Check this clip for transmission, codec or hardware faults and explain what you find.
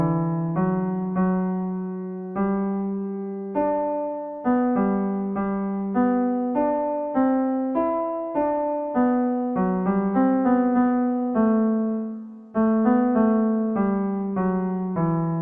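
One fault runs through the whole clip: a wrong sample rate. The audio plays at half speed and drops a full octave, 12 semitones. That fits 48 kHz material played back at 24 kHz without conversion. Everything sounds low, slow and dragged.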